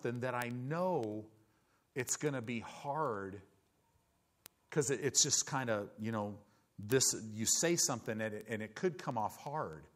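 From 0.16 s to 9.91 s, word clock ticks run through the speech: sharp ticks of uneven strength at a steady rate of about ten per second, roughly a hundred in all. The receiving device runs on its own clock instead of locking to the sender's. The spacing fits a clock error of about 200 ppm. At each slip a single sample is dropped or repeated. A spectrogram shows evenly spaced thin vertical broadband lines. The waveform shows a one-sample discontinuity at each.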